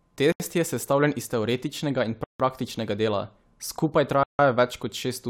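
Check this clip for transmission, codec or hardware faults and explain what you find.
Three dropouts in the speech, all the same fault, a Bluetooth stall. At 0.32–0.40 s (78 ms), 2.24–2.40 s (156 ms) and 4.23–4.39 s (157 ms), the sound cuts to dead silence, then resumes. The likely cause is delayed packets starving the headphone buffer. Both the waveform and the spectrogram show flat, empty gaps with abrupt edges.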